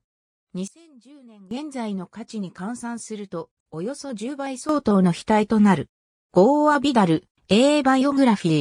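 Sudden gain jumps at 0.68 s and 4.69 s: the level drops by about 18 dB until 1.51 s, then rises by about 12 dB from 4.69 s to the end, with the sound and its background noise stepping together. The likely cause is digital gain applied instantly, with no ramp.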